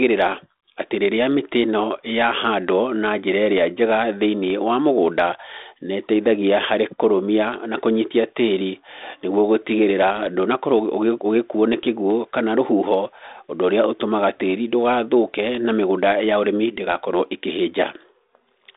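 No technical faults can be heard anywhere in the speech. It arrives through a G.726 ADPCM telephone path at 32 kbit/s, which confines it to a band of about 250 Hz to 3.7 kHz and leaves only a light trace of the codec's coding noise riding on the speech.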